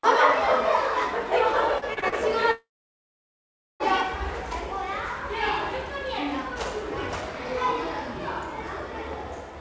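A recording of everyday sounds carried over a call link whose G.722 coding, at what sounds like 64 kbps, leaves nothing above 8 kHz. From 1.79 to 2.15 s there is repeated packet loss (robotic sound): five short packet gaps, the longest 37 ms, are each patched by stretching the preceding audio. About a third of that span is synthetic fill, so the sound turns choppy, with small pieces missing. From 2.51 to 3.83 s comes a long network dropout, likely the link stalling so that roughly 1.3 s of audio never arrived. The receiver first continues the last sound as a short fading buzz, then falls silent for about 1.15 s, and the audio resumes with that stretch gone.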